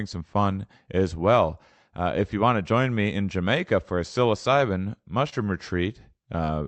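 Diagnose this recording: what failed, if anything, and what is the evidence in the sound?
At the network stage, a short concealed packet loss: about 20 ms of audio arrived too late for the Opus decoder, which patched roughly 26 ms by extending the preceding sound. Just after "for a psilocybin", from 5.29 to 5.41 s, this is heard as a brief smear before the real signal blends back in.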